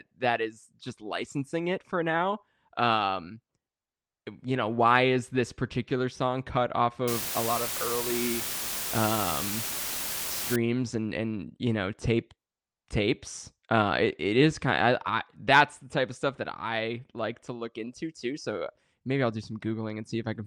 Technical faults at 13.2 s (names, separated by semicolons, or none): none